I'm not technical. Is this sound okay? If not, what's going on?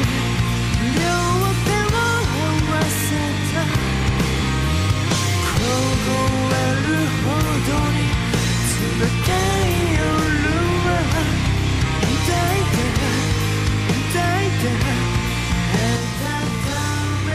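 No. From about 15.96 s to the end, everything sounds doubled, as if two copies were playing almost together, with the second one arriving a split second later at the same loudness. This is a channel delay (doubling): one of the two original channels fell behind the other by 40 ms, likely because of a long buffer, and when both were mixed into a single channel, that late copy stayed audible as a distinct echo.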